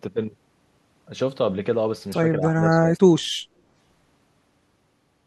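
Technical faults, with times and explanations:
2.39–2.97 s, speech suppressed in double talk: the speech dips by a few decibels in patches totalling under half a second, likely an echo canceller turning down both talkers during overlap.
3.47–3.58 s, background gated by the echo canceller: room sound drops by about 6 dB for a tenth of a second, as the canceller briefly clamps the microphone during loudspeaker playback.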